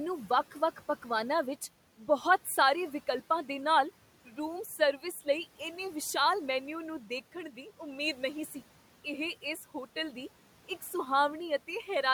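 At 4.26 to 4.38 s, speech is cut by the noise suppressor. It mistook soft speech for background and dipped it about 8 dB, sounding swallowed.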